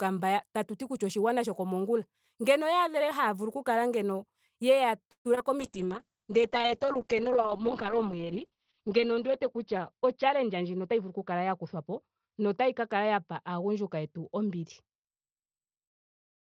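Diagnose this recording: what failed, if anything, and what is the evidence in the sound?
Network stage, call audio freeze. From 5.11 to 5.27 s the speech stalls into a fading buzz, then about 90 ms of silence. Delayed packets likely emptied the jitter buffer, adding roughly 136 ms of gap.

Network stage, short concealed packet loss. At 5.35 to 5.39 s and 5.39 to 5.42 s there are brief smears. The receiver continued the previous sound to cover two missing 20 ms chunks.

Codec stage, call bitrate drop. From 5.61 s to the end the speech turns rough and muffled, with highs cut near 6 kHz. That points to Opus falling from 32 to 7 kbps, bottoming out for about 3.5 s.

Call processing, jitter buffer speed-up. Between 10.02 and 11.01 s the speech runs about 6% fast at unchanged pitch. The buffer trimmed pitch periods, removing roughly 70 ms to cut delay.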